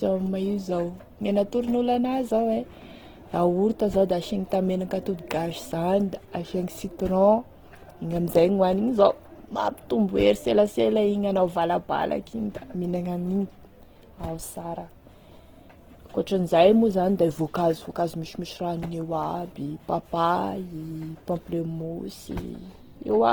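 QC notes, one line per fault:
Throughout, Opus compression: speech turns grainy and rough, upper bands noise-filled to 20.1 kHz, likely from the music (CELT) mode starved at roughly 16 kbps.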